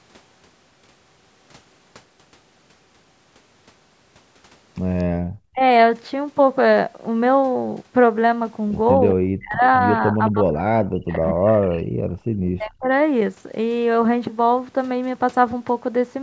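At 4.98 to 5.03 s there is a brief echo leak: a faint copy of the speech returns 242 ms late, very low at roughly 35 dB below the voice, most likely because the far end's echo canceller missed part of what its loudspeaker fed back into its microphone. On a spectrogram it shows as weak, smeared harmonics trailing the original. Straight after, from 5.04 to 5.22 s, the background is gated by the echo canceller. The room tone drops by up to about 34 dB and then returns, which shows as a sudden hole in the waveform's noise floor.

Speech is suppressed in double talk at 5.50 to 5.61 s, 9.14 to 9.63 s, 10.07 to 11.48 s and 12.56 to 12.90 s. The talker's level dips by roughly 30 to 40 dB, with close to a second affected within the longest stretch. This is likely the canceller clamping down while both sides spoke at once. The waveform envelope caves in abruptly, and upper harmonics vanish from the spectrogram in those windows.

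A stronger echo leak runs from 11.46 to 11.81 s, again 242 ms behind the original. It sits roughly 25 dB under the speech and is more clearly audible as a doubled trace. Gating follows from 11.83 to 12.28 s, a shallower dip of up to about 10 dB in the background.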